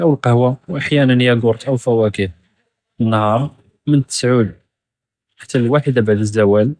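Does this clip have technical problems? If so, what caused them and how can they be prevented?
No, the speech signal comes through without any technical fault, so there is nothing here that needs a cause or a preventive fix.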